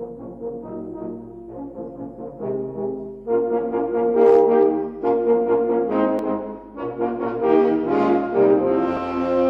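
At 6.19 s and again at 8.97 s, the likely cause is a dropped buffer (overrun): the samples were overwritten before being read, losing a few milliseconds each time. The audio splices straight across the gap, so each spot gives a small jump forward.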